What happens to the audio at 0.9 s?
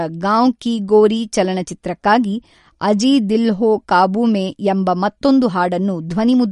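At 0.9 s, as throughout, the speech carries likely MP3 compression damage: nothing above 11.2 kHz, and weak frequency detail flickers frame to frame, giving a watery, smeared sound that fits roughly 48 kbps.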